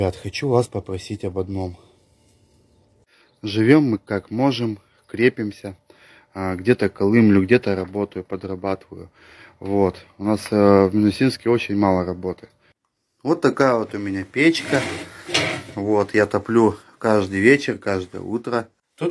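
Nothing technically wrong can be heard in this audio. No fault turns up at any point in the recording.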